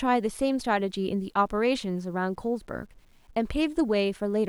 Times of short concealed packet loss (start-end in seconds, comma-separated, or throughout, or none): none